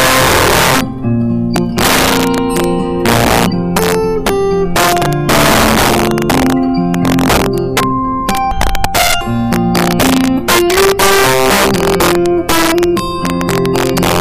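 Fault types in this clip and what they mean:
Integer overflow: driven about 10 dB too hot, roughly one sample in twenty exceeds the integer limit and wraps to the opposite sign, producing violent cracks on loud passages.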